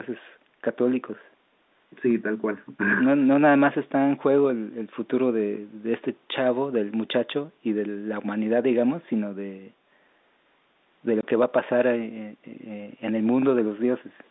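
At 11.21 s the speech drops out completely until 11.23 s. This is packet loss filled with silence. A 20 ms stretch of audio never arrived, and the receiver played nothing in its place. The gap's length fits two lost packets of 10 ms each. The signal stops and restarts abruptly at the hard edges of the hole. The dropout is very short, a brief hole against the narrow telephone band of the G.711 line.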